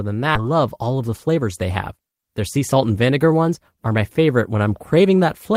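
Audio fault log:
0.35 to 0.43 s, skip ahead: playback jumps forward here, with roughly 0.7 s of speech dropped and no fill inserted, only a brief 9 ms join between the two sides. Audio that arrived later was already waiting, so the receiver discarded the stretch in between, either lost on the way or thrown out when the jitter buffer overflowed. That cuts the delay by about the same amount, and the speech on either side is spliced almost directly, so it sounds like a sudden jump.
0.94 to 1.43 s, jitter buffer speed-up: the speech runs at about 109% of its normal rate while keeping its pitch, so this stretch sounds slightly hurried. The jitter buffer was holding more audio than its target, and to bring the delay down the receiver repeatedly removed short segments of one or a few pitch periods. Altogether about 50 ms is trimmed across roughly half a second.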